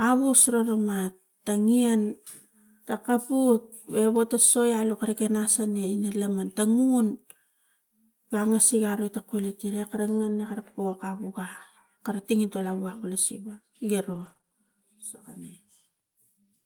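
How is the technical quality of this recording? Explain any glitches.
Packet loss near the end damages the call audio, around 14.1 to 14.5 s.

Lost packet rebuilt from error correction, 14.13 to 14.31 s: about 100 ms was rebuilt from low-bitrate redundant copies, so there is no gap, but the sound turns rough and noisy.

Short concealed packet loss at 14.33, 14.37 and 14.41 s: each 20 ms hole was filled by extrapolating the preceding sound, giving brief smeared, wobbly sound.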